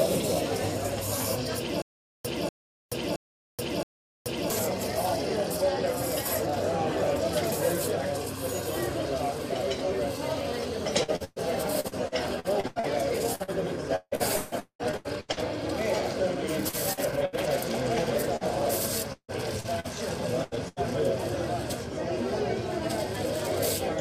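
From 1.82 to 4.50 s the same fragment of about 243 ms plays, cuts to dead digital silence for about 428 ms, then returns, at an even pace of one burst every 0.67 s. It repeats four times. This stutter with silent gaps is likely a stalled player or stream that replays its last buffered piece at each retry and then runs dry. Whatever should have played during those silences never arrives.

From 11.03 to 15.40 s the sound turns choppy, with roughly twenty small holes close together, the longest about 0.2 s. About a third of the stretch is synthetic fill. This is repeated packet loss: packets keep failing to arrive in time, and each gap is patched by stretching the preceding sound. Because the gaps come so quickly, the patches join into a choppy texture with pieces missing.

At 16.69 and 16.93 s, and again at 18.36 s, there are brief smears, each lasting about 40 ms. Each is a short concealed packet loss. 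A few hundredths of a second never reached the decoder. The receiver filled the hole by extending the last sound and then blended back into the real signal, so each one sounds like a quick smear or wobble.

From 17.25 to 17.35 s a longer hole of about 80 ms appears. The end of the preceding sound hangs on and fades rather than ticking past, and the audio resumes further along. This is a burst of packet loss. Several consecutive packets went missing, and the concealment held the last sound while turning it down, so the material in between is lost.

From 19.13 to 20.79 s the choppy texture returns. It comes from about six gaps, the longest about 0.16 s, and roughly a quarter of that span is concealed. This is another run of repeated packet loss with the same fill-and-drop mechanism as before.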